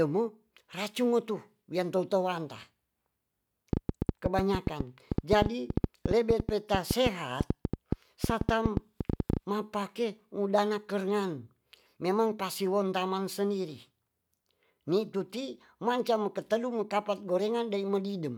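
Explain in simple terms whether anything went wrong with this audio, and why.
Yes, something went wrong. From 3.73 to 9.38 s, a train of clicks ticks over the speech, around forty sharp pops at an uneven pace of about seven or eight per second, audible even in pauses. The likely cause is electrical interference or a faulty connection or power supply.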